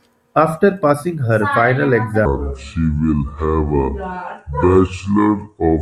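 At 2.25 s the speech drops into a section at the wrong speed that runs to the end at 5.82 s, playing at 0.693 times its proper rate. Pitch falls with the tempo, about seven semitones, so the voice turns deep, slow and drawn out. The likely cause is this stretch being played against the wrong clock. On a spectrogram the harmonics and formants shift abruptly downward and spread wider in time, and the waveform's syllables lengthen.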